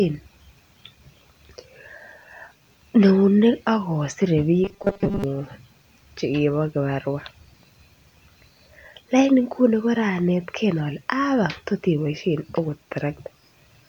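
Speech clip in which, from 4.64 to 5.24 s, the voice turns into a rigid, metallic 200 Hz buzz: robotic sound from repeated short buffers, likely a 5 ms chunk looped over most of that stretch.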